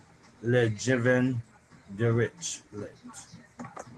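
No technical faults can be heard in this speech clip. The Opus voice compression leaves only a light coding texture, and the top end stays open in a way that fits its hybrid mode at full bandwidth.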